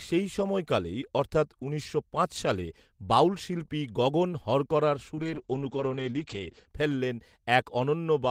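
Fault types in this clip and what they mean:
Call bitrate drop: the call's bandwidth estimate fell and the encoder went from about 32 kbps to 9 kbps for roughly 1.4 s. From 5.19 to 6.73 s, right after "বাউল শিল্পী গগন হরকরার", the speech turns coarse and watery, with everything above 8 kHz cut away.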